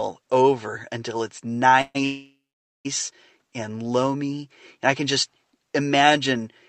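Speech that stalls twice with a call audio freeze: at 1.81 to 1.97 s the sound smears into a fading buzz or hiss for 132 ms, ending in about 40 ms of silence, then at 2.05 to 2.87 s it hangs for 802 ms, 500 ms of it silent, before resuming where it stopped. Delayed packets likely drained the Opus call's jitter buffer.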